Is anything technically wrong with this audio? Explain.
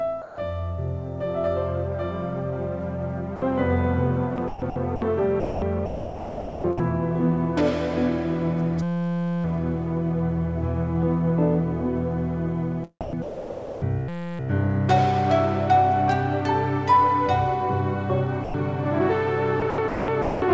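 Yes. Three kinds of fault recur through the clip, heard through a call path whose G.722 coding leaves nothing above 8 kHz.

Sound dropped by the voice detector occurs at 0.22–0.38 s, 3.36–3.42 s and 18.44–18.54 s. Each time the sound gives way to steady synthetic noise for 60 to 160 ms. The likely cause is the sender's voice detector treating the sound as background and sending comfort noise instead.

Sound chopped by the voice detector affects 4.36–5.02 s, 5.40–6.80 s, 13.01–13.82 s and 19.60–20.42 s. The detector's gating likely switches on and off repeatedly, so fragments of sound alternate with comfort noise. Within 5.40–6.80 s about 1.0 s of sound is replaced.

A system hang loop appears at 8.83–9.44 s and 14.08–14.39 s. A 5.8 ms slice of audio repeats exactly, which fits a 256-sample buffer cycling while the system froze. The result is a steady buzz at 172 Hz lasting roughly 0.6 s and 0.3 s.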